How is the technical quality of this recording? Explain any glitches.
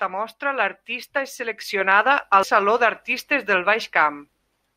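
One glitch stands out in this speech recording. Damaged data in a compressed stream occurs at 2.43 s, just after "mostra l’artista és seleccionada". Corrupted bytes made the decoder misread a frame and lose sync, forcing it to hunt for the next valid frame header. The result is a brief chirp, squawk, click or short hole breaking into the speech.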